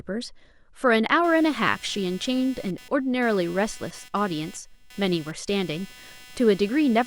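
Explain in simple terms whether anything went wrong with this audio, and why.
Computer activity noise starts at 1.24 s and runs to the end: a quiet, buzzy chirping, roughly 300 pulses a second, under the speech. Unlike steady mains hum, it follows what the computer is doing, which disturbs the audio circuit's shared ground.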